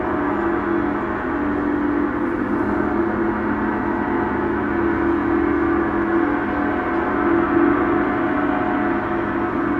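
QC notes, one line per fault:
No faults were found in this clip.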